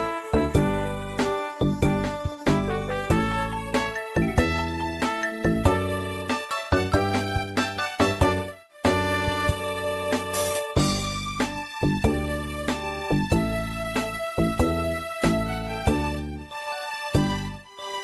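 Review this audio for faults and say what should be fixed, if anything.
No faults found; nothing needs fixing.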